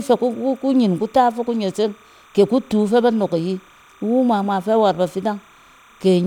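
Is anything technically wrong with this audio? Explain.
Yes. Timecode bleed runs through the whole speech clip. Linear timecode from an adjacent track or cable is leaking into the audio path. That code is a square wave flipping between two pitches, here around 1 and 2 kHz, and its 30 frames per second give the pattern a steady rhythm. It sits about 30 dB below the speech as a continuous chirping warble.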